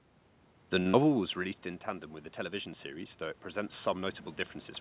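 At 0.80 s a packet arrived late and the jitter buffer ran dry: a short stall from a late packet. The receiver held the last sound for about 55 ms until the data came, so nothing is lost, but a syllable drags with a faint buzz.

From 0.90 to 0.95 s, about 40 ms of audio never reached the decoder. This is short concealed packet loss: the receiver papered over the gap, leaving a brief smear or wobble in the speech.

From 1.34 to 4.23 s, automatic gain is rising. The control raises its gain by about 5 dB after the input falls about 14 dB when the talker moves back around 1.0 s. Voice and room noise swell together slowly, all within the G.711 band that stops at 4 kHz.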